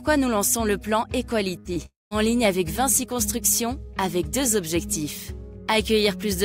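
At 1.59 to 1.67 s, a burst of packet loss: about 60 ms never arrived, so the last sound is stretched and faded, and the audio resumes further on rather than just smearing.

At 1.73 to 1.78 s, a short concealed packet loss: only about 20 ms is missing, heard as a brief wobble blended straight back, too short to fade.

From 1.86 to 2.13 s, the last sound is drawn out and fades, then roughly 180 ms of silence before audio returns with about 260 ms missing. The silence sets this apart from the shorter gaps, and it is likely a long network dropout.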